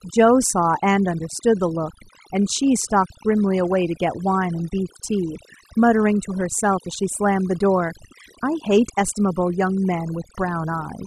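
From start to finish the background sinks to near silence dotted with twinkling specks. It is overdone noise removal: set too hard, the reduction pulls individual frequency bands down whenever they approach its noise estimate, carrying softer speech detail away too.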